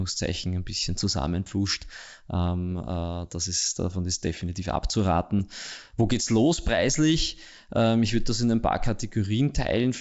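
Speech over G.722 wideband coding has bit errors on an ADPCM link at 5.39–5.45 s: a pop and rough burst with a level jump. Corrupted bits upset the decoder's step size and predictor, so the damage rings on instead of dropping out like packet loss.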